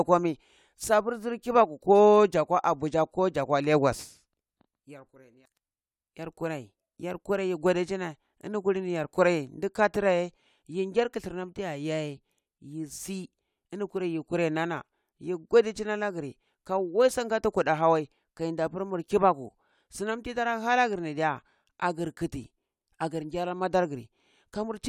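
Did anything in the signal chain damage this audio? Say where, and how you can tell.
No, no signal-chain damage heard.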